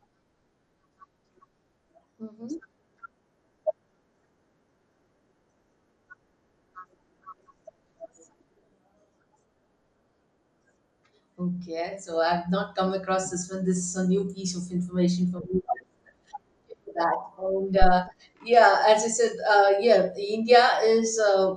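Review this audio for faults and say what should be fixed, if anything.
The whole recording carries audible MP2 compression damage. The speech sounds dull and plainly gurgling, with a granular edge on the voice, as upper sub-bands drop out and the remaining ones are coarsely quantised. The cause is likely a low-rate MPEG Layer II encode, consistent with something near 80 kbps, too few bits to keep all 32 bands alive. To prevent this, encode at a higher bitrate or use a more efficient codec for the distribution chain.

DAB burbling appears as a brief burst at 2.99 s and a longer stretch from 14.11 to 14.31 s. Uncorrected bit errors in the MP2 stream, at a rate on the order of a tenth of a percent, corrupt samples, putting short blips of noise into individual sub-bands, and where scale factor errors get through, sub-bands jump in level for up to a frame. To prevent this, improve reception margin with better antenna placement or signal strength, or apply stronger error protection.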